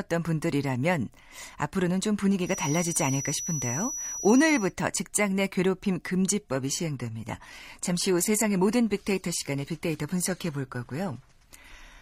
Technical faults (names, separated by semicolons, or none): feedback whistle; adaptive stream at a lower bitrate